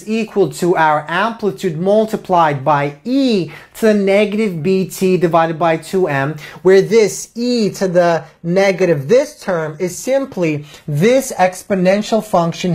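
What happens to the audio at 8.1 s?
At 8.1 s you're inside an adaptive stream switch to a lower bitrate, which kicks in abruptly at 7.42 s with no gap and lasts to the end. The connection evidently dipped, so the player swapped to a leaner rendition, which sounds like a drop from roughly 96 kbit/s AAC to a very low-rate HE-AAC stream. The treble drops, nothing gets through above 14.9 kHz, and the codec artefacts rise.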